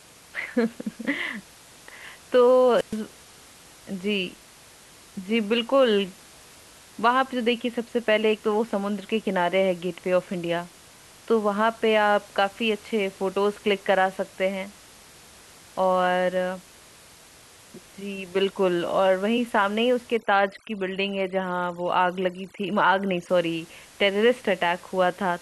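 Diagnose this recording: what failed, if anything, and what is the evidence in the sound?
At 2.74 to 2.97 s the analogue radio link suffers a wireless microphone squelch dropout. Hiss swells as the FM signal fades, then the receiver's squelch mutes everything for about 119 ms before the speech returns. The waveform shows a flat gap, and the spectrogram shows a broadband noise smear followed by an empty column.

From 20.17 to 23.29 s, a processing stage applies overdone noise removal. The room noise sits about 25 dB below the speech elsewhere, but here it collapses to near silence with twinkling specks. Frequency bands near the noise estimate are driven far down, and quiet parts of the voice go with them. The spectrogram shows isolated scattered bins and frayed, gated low-level harmonics.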